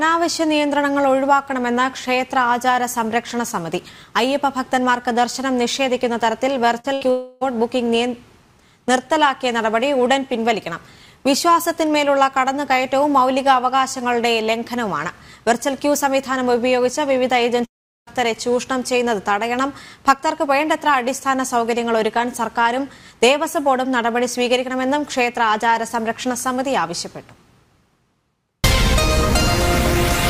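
At 6.79 to 6.86 s and again at 6.94 to 7.03 s there are two bursts of packet loss. In each, a short run of audio never arrived, about 40 ms and then 80 ms, and the receiver kept repeating the last bit of sound while turning it down. Each gap is heard as a brief smeared buzz or hiss that fades before the sound jumps ahead. On a spectrogram each appears as a short smeared patch; on the waveform it is a decaying patch.

From 7.11 to 7.43 s, and again from 17.65 to 18.09 s, the audio cuts out for about 0.3 s and then about 0.4 s, both likely caused by a long network dropout. In the first, the receiver keeps stretching the last sound across the whole gap as a fading buzz or hiss. In the second, the filler dies out almost at once, leaving about 0.39 s of silence. In both cases the audio resumes with the middle part missing. On a spectrogram the first shows smeared, flattened bands and the second a near-empty gap; the waveform decays toward a flat line.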